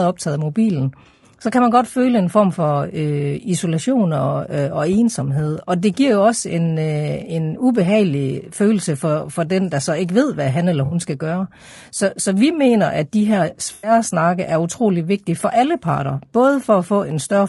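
Speech carried through what is likely low-delay AAC compression, with grain that fits a bitrate near 32 kbps. The short frames resolve pitch harmonics poorly, so the voice sounds plainly rough and grainy, with noise between harmonics and a synthetic-sounding top band. AAC frame loss with concealment occurs at 1.03 to 1.23 s, where 100 ms of audio drops out in short runs of a few tens of milliseconds spread across 160 ms. It happens again at 10.85 to 10.95 s, losing 60 ms, and at 13.73 to 13.91 s, losing 100 ms. Each time the decoder fills the gap from the last good spectrum, leaving a brief smeared, noisy or phasey patch.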